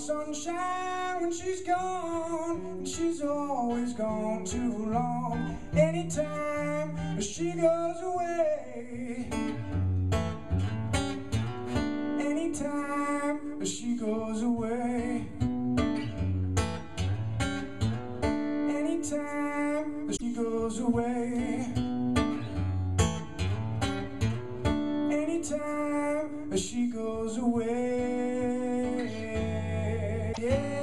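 Damaged data in a compressed stream corrupts two short stretches of the encoded file, from 20.16 to 20.23 s and from 30.29 to 30.38 s. At each point the bytes reaching the decoder are wrong, so it misreads or rejects those frames, loses its place in the stream and hunts for the next valid frame header. Each time this is heard as a brief chirp, squawk, click or short hole, roughly 70 to 90 ms long, cutting into the audio before playback recovers.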